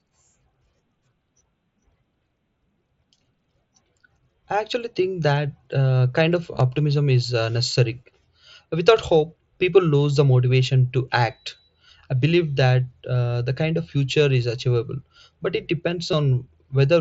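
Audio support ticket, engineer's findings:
Concealed Bluetooth headset packet loss at 6.53–6.61 s and 16.11 s. Headset-to-phone link dropping voice packets; the receiver fills each gap by repeating the best-matching slice of recent waveform. At 6.53 s, about 45 ms lost across 75 ms, longest run 15 ms: brief buzzy sustain, slight warble on recovery. At 16.11 s, a 15 ms loss, short buzzy hold. mSBC wideband link carrying the speech shows light graininess.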